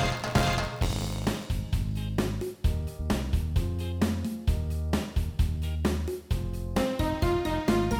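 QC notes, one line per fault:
0.00 to 1.47 s, buffer tearing. A robotic rattle buzzes at 86.1 Hz while sound plays. The writer and reader of the audio buffer have slipped. A small slice of each period replays audio about 20 ms old, with hard joins. The rate fits a 512-sample buffer.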